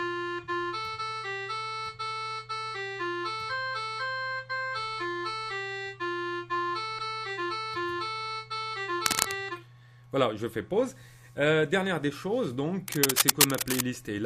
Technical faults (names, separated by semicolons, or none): cable scratch noise